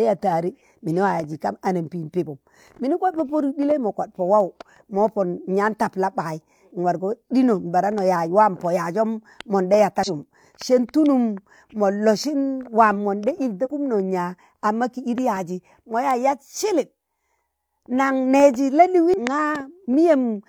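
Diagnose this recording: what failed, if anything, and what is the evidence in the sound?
The codec stage failed, with damaged data in a compressed stream. The speech is broken by three brief bursts of corrupted sound, heard as short chirps or blips. They fall at 10.03 to 10.09 s, 13.61 to 13.68 s and 19.14 to 19.18 s, each lasting roughly 40 to 70 ms. Bytes in the encoded stream were lost or overwritten there. The decoder misread those frames, lost sync, and resumed at the next valid frame header.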